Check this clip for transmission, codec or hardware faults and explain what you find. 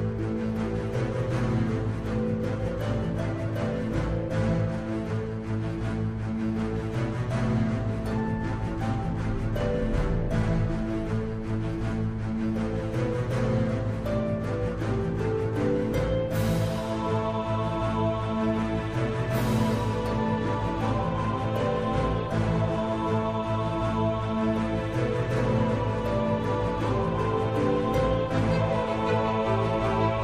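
No transmission, codec or hardware faults are audible here.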